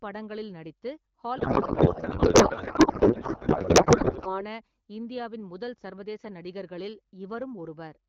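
Right after "படங்களில் நடித்து", from 1.37 to 4.44 s, there's a codec payload misread: the speech turns into garbled, warbly noise that barely tracks it, which fits octet-aligned AMR-WB frames being unpacked as bandwidth-efficient ones. Clean speech resumes at "இந்தியாவின் முதல்".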